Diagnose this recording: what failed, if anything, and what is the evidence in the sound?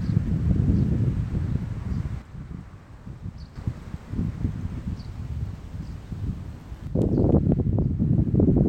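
The level falls abruptly by about 6 dB from 2.22 to 3.56 s and again from 6.87 s to the end. This is a channel dropout, likely from an intermittent stereo connection in the analogue wiring: with one side lost, the mono sum keeps only half of the shared content.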